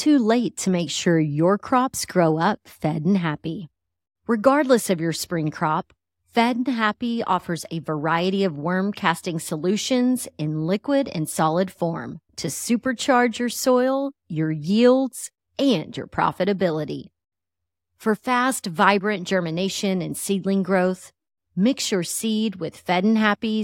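A speech recording, with no technical faults audible anywhere in it. There is nothing here that needs a time or a cause.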